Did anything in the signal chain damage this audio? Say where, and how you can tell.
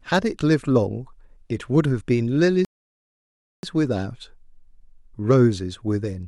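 Yes, at the playback stage. A rebuffering stall cuts the speech to silence at 2.65 s. It resumes at 3.63 s exactly where it stopped. Nothing is missing, but about 0.98 s is added. The player ran out of downloaded audio and waited for more.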